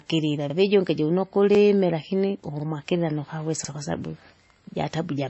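Across the whole speech clip, the audio has the artefacts of more than one codec heard together, and nothing above 8 kHz. This likely comes from transcoding between lossy codecs: a low-rate MP3 (around 26 kbit/s) re-encoded as WMA 1 at about 64 kbit/s. The spectrogram shows a hard ceiling at 8 kHz and blotchy, holed upper bands.

Overlapping chunks cause a short stutter at 0.50 s (just before "vijunge jiuno"), at 1.55 s (just after "vijunge jiuno"), at 2.60 s (just before "nukawesa kwasabu") and at 3.65 s. At each join, about 48 ms plays twice as each 1 s chunk begins early. The waveform shows a repeated segment and a small discontinuity.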